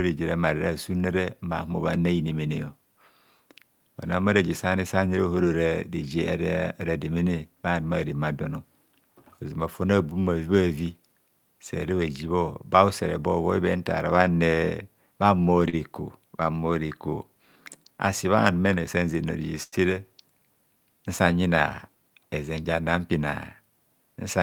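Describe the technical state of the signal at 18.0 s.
Jitter buffer speed-up runs from 17.77 to 17.99 s, just before "asi bha numene san": the receiver trimmed about 40 ms of surplus buffered audio by cutting out short pitch-period pieces, so the speech plays at 114% speed with unchanged pitch and sounds briefly hurried.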